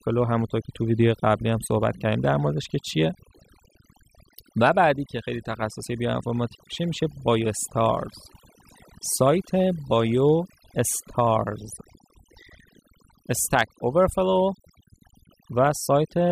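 Throughout the speech, overdone noise removal is audible: the noise reducer was set too aggressively, pulling individual frequency bands down or out whenever they sat close to its noise estimate. Gaps become near-silent with twinkling specks, and the voice loses its quieter components.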